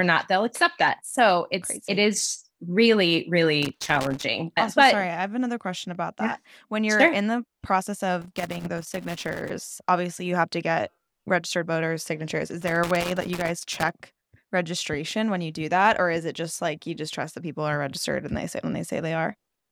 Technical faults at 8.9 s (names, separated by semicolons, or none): loose connector crackle